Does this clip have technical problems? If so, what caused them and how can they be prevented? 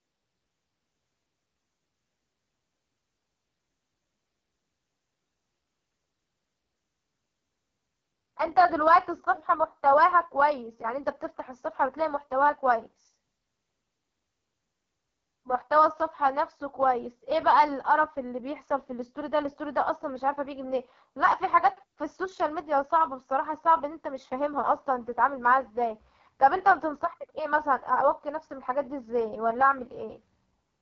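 Yes. Throughout, the speech has the rough, raspy texture of the AMR wideband (HD Voice) codec at its lowest rate, which fits about 6.6 kbit/s. The vocal tract model is starved of bits, so the pulse excitation buzzes. A spectrogram shows smeared harmonics, a noise-filled band from 6.4 kHz, and nothing above 7.3 kHz. Prevent this by negotiating AMR-WB at 12.65 kbit/s or higher.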